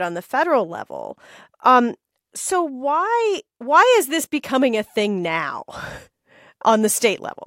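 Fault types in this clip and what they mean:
No faults detected.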